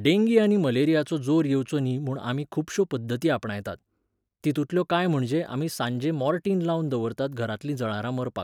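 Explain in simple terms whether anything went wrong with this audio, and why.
Nothing stood out as wrong when listening to this speech recording.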